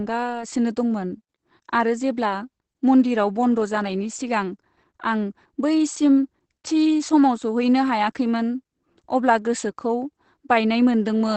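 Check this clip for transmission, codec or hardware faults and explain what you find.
Opus voice compression affects the whole clip. The band stops at 8.6 kHz, so the speech sounds muffled. The voice is rebuilt by linear prediction from a coarsely coded excitation. That makes it hoarse and slightly robotic. The damage fits a rate near 12 kbps.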